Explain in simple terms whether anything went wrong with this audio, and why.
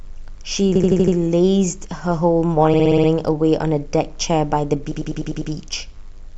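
Repeated frames at 0.75 s, 2.73 s and 4.91 s: a tiny slice of speech (80 ms, 60 ms, then 100 ms) plays five or six extra times, like a skipping record. Chunks of the stored audio got duplicated, stretching the clip by 0.4 s, 0.36 s and 0.6 s.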